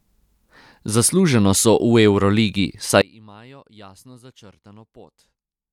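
From 3.02 s to the end, the likely cause is one channel inverted: one side of the stereo pair has its polarity flipped, so the signal common to both channels cancels when they are combined to mono. In this speech clip the centred voice drops by about 28 dB at that point, leaving only a faint residue of the difference between the two channels.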